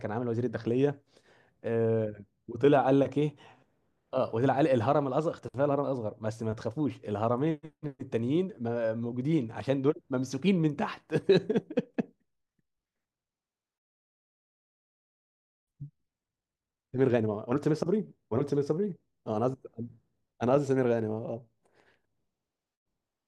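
No technical faults are audible.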